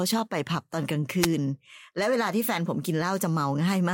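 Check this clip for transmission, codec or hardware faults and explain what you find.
One fault appears: a wireless microphone noise hit from 1.20 to 1.29 s. The analogue FM radio link faded briefly as reflected signals cancelled, letting receiver noise rise over the speech as a short swish of static. A digital dropout would leave a silent gap instead of this hiss.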